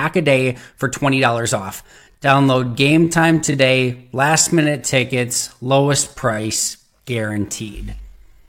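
At about 1.8 s the speech suddenly slows down and stays that way to the end, running at roughly 0.68 times its earlier pace while the pitch doesn't drop at all. That's a time-stretched section, likely from software lengthening the audio to fill a slot by repeating short slices of it. The stretched part comes across as dragging, with syllables drawn out.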